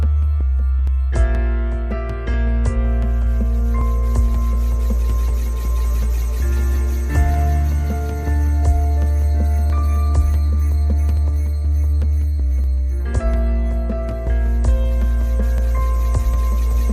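Two devices likely running on separate, mismatched clocks, off by roughly a thousand parts per million, let the buffer between them drift until about ten clock drift buffer slips occur. Each drops or repeats a block of roughly 70 samples, heard as a regular click every 1.47 s from 0.87 to 15.58 s.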